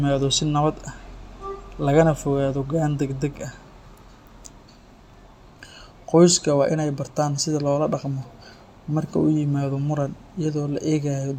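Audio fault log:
No audible faults detected.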